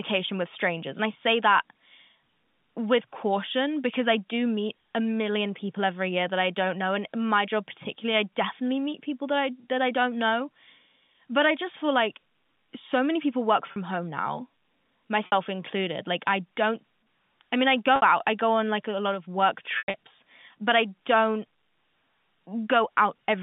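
Packet loss with pitch repetition hits at 13.72 s after "so many people work", 15.26 s, 17.96 s after "I mean I", and 19.78 s. The receiver loops the last pitch period over each gap, so the 40 to 60 ms ones sound like a brief buzzy hold. The 160 ms patchy stretch at 19.78 s fades toward silence.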